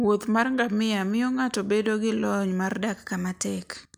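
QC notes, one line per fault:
2.81–3.76 s, drift correction step: the speech suddenly runs about 6% fast and rises by roughly a semitone (104 cents), holds there for just under a second, then snaps back to normal. This is likely clock-matching software adjusting the playback rate in one step to rebalance its buffer. Speed and pitch move together and change abruptly at both edges, which distinguishes it from wow or flutter, whose pitch wavers gradually and keeps cycling.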